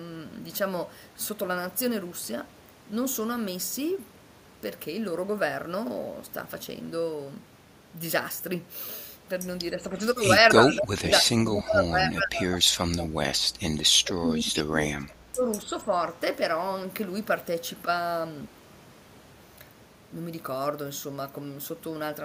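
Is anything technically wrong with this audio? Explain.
Yes, two faults appear in this speech clip, both clustered between about 9.8 and 15.9 seconds.

Speech suppressed in double talk occurs at 9.76 to 10.02 s, 10.41 to 13.6 s, 13.91 to 15.46 s and 15.65 to 15.92 s. This is likely an echo canceller that could not separate the local talker from loudspeaker echo while both sides spoke, so it turned everything down. The voice sinks by anything from a slight dip to roughly 25 dB, deepest in the two long stretches.

Echo leak appears at 10.67 to 10.8 s and 11.06 to 11.11 s. Here a loudspeaker-side echo canceller likely failed to remove all of what its microphone caught, and the residue was sent back. It comes through as brief scraps of a copy delayed by 283 ms, sitting about 10 dB below the direct speech.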